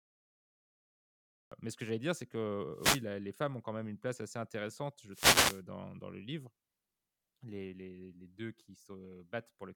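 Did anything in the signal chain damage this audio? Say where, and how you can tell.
Yes. The first 1.52 s are dead digital silence, then the speech jumps in mid-sound at 1.52 s with no attack or fade. That's a cut-off start: the recording or capture began late, so the file opens partway through whatever was being said.

Two bursts of static show a wireless microphone noise hit, from 2.73 to 3.06 s and from 5.11 to 5.62 s. These happen on the analogue radio link before the converter: reflections cancel the FM signal, and receiver hiss swells up over the speech.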